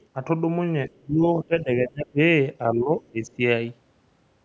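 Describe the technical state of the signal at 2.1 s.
At 2.1 s you're inside a stretch of speech suppressed in double talk, running from 1.44 to 2.19 s. The speech dips and breaks up, losing roughly 25 dB at its worst, likely because the echo canceller mistook it for loudspeaker echo while both sides talked.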